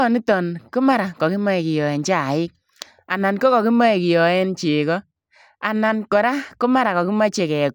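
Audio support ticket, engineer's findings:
Listened through the full recording and nothing stood out; no findings to log.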